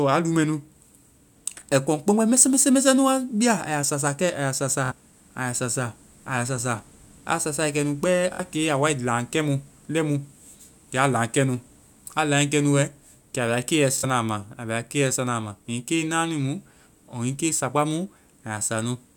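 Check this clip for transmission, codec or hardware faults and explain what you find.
Three Bluetooth stutters occur, at 4.86 to 4.92 s, 8.34 to 8.40 s and 13.98 to 14.04 s. At each point packets arrived late or not at all, and the receiver replayed its last short buffer. The speech buzzes briefly, then resumes about 46 ms further on, which fits two lost frames.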